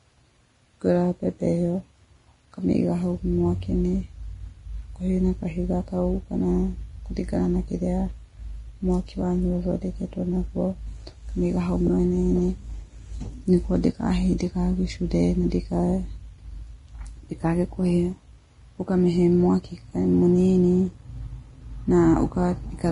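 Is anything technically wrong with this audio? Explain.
Yes. Throughout the speech, the audio carries heavy damage that is likely from Vorbis compression at a low bitrate, around 30 kbps by the sound of it. At that rate the encoder keeps only a smooth spectral envelope and quantises the detail above it very coarsely, so treble texture is replaced by noise of similar energy. Nothing survives above 10.6 kHz, the top sounds hissy and grainy, tones are roughened, and consonant attacks are blurred.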